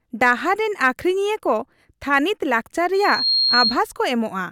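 Speech, with loudspeaker feedback squeal from 2.94 to 3.80 s. A 4.2 kHz tone swells over about a third of a second, ending louder than the speech. The microphone hears its own loudspeaker, and that loop runs away.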